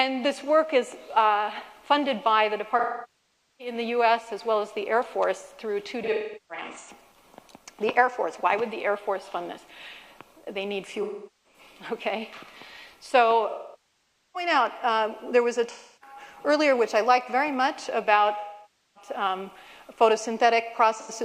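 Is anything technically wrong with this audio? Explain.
Yes. AAC frame loss with concealment occurs seven times: 2.79–3.74, 6.03–6.90, 11.01–11.59, 13.49–14.50, 15.71–16.16, 18.40–19.10 and 20.99–21.11 s. Coded frames were lost. The decoder patched each gap from the last good spectrum, giving smeared, noisy or phasey stretches. The 6.03 s patch is broken up rather than continuous.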